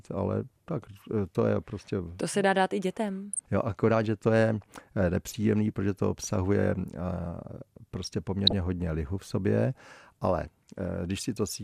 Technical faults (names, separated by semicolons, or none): DAB burbling